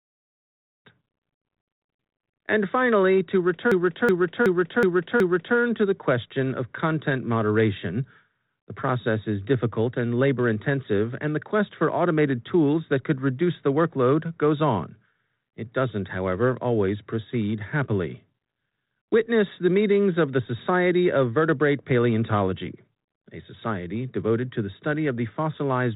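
Right after "finally to", at 3.72 s, there's a system hang loop that runs until 5.57 s. The machine or driver stalled while the sound hardware kept replaying its ring buffer, so one 0.37 s chunk repeats exactly five times at about 2.7 per second, a lurching stutter that fits a 16384-sample buffer. Practically nothing goes missing; the sound picks up with "to the question of", still in its telephone band topping out at 3.8 kHz.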